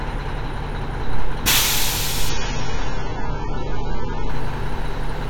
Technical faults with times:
2.29-4.29 adaptive stream at a lower bitrate

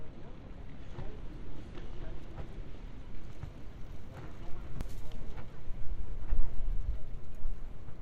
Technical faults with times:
4.81 damaged data in a compressed stream

